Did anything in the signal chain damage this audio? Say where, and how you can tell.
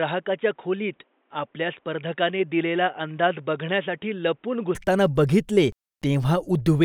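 Yes. Up to 4.75 s the speech has nothing above 3.8 kHz, runs roughly 5 dB quieter and carries faint noise well below it. It then clears abruptly, without a gap. This is likely an input switched to a poorer device at capture, such as a headset call profile.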